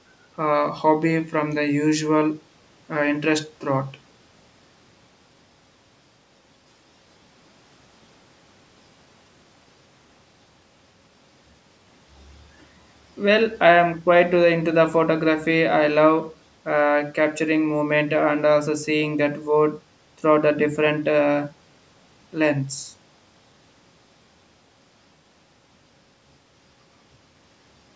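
No technical faults are present in the speech; it carries the ordinary signature of call microphone processing, with the lowest bass trimmed by its high-pass filter and nothing above 8 kHz.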